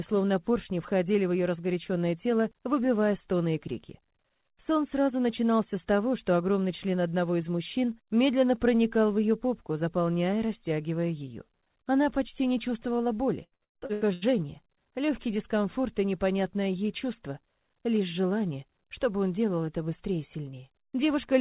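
From 13.44 to 14.25 s there's repeated packet loss: seven quick dropouts, up to 110 ms each, patched by stretching the last sound, so it turns choppy and robotic.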